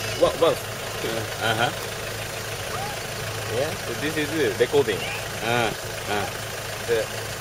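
No technical faults can be heard anywhere in this clip.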